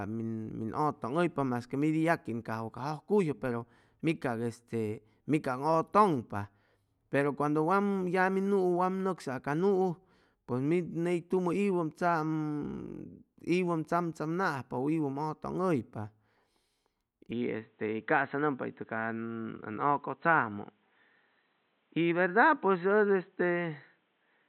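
At 17.31 s the speech abruptly loses its top end and stays that way to the end of the clip. Nothing above 4 kHz remains, so consonants blur and the voice sounds boxy and dull. There is no gap at the change and no jump in loudness. A new, faint background noise appears, roughly 45 dB down. The likely cause is the input switched to a poorer device, such as a headset's call profile.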